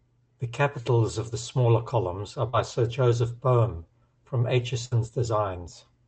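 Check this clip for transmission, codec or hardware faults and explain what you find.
Two transmission faults stand out, both dropouts in the network stream. The audio passes through a call codec whose content stops around 8 kHz.

At 2.49 to 2.55 s there is a brief smear or wobble. This is short concealed packet loss: about 40 ms of audio arrived too late for the decoder, and the receiver filled roughly 37 ms by extending the preceding sound before blending back into the real signal.

At 4.85 to 4.93 s the speech is drawn out and fades, then jumps ahead. That is a burst of packet loss: about 60 ms never arrived. The receiver stretched the last sound for around 63 ms while lowering its level, and when playback resumed the missing stretch was gone.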